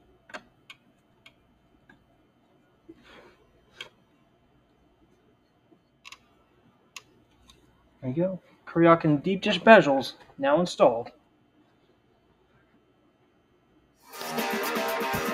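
From start to finish, a noise suppressor applied to music or sounds is acting on the audio. Built for speech, it reads sustained tones, ambience and reverb as noise and pulls them down by around 20 dB, while onsets pass. Held material and decays sink behind each attack, so the sound pumps, flutters or thins out. A compressor's pumping follows overall loudness. This gain instead tracks how steady the sound is, sparing transients and cutting sustains.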